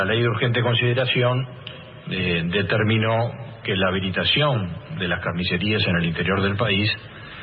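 No audible faults: nothing in the signal chain stands out as broken at any point in the clip.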